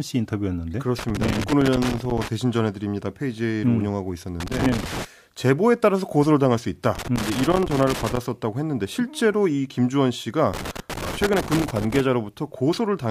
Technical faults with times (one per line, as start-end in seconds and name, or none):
0.99-2.28 loose connector crackle
4.40-5.05 loose connector crackle
6.95-8.17 loose connector crackle
10.54-12.01 loose connector crackle